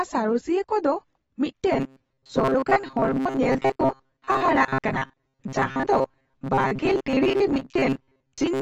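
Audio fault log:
throughout AAC compression: The audio is dull and smeared, with a lowered top end and a plainly audible warbling, fizzy texture on sibilants and sustained sounds. This fits a low-bitrate AAC-LC encode, likely around 24 kbps, where the encoder lowers its cut-off to save bits and quantises the remaining spectrum coarsely. It leaves gaps or substitute noise in bands the hearing model judges less important, which smears transients and makes steady sounds shimmer.
1.72 s to end: robotic sound from repeated short buffers. From 1.72 s onward the speech becomes a rigid, metallic buzz pitched at 133 Hz that still loosely tracks the syllables. The likely cause is audio arriving too slowly, with the playback filling the gaps by looping the last stretch of about 7.5 ms, one period of the buzz. Roughly half of the signal is replayed rather than new, so real audio is skipped and the loop imposes its fixed pitch.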